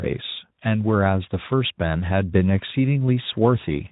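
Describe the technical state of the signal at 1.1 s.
At 1.1 s the signal is intact, with no fault at that moment, and the speech there carries only the light coloration expected from the Speex codec path at about 15 kbps.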